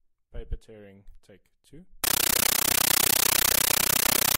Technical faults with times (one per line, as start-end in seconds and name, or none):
2.04-4.38 compressed stream played as audio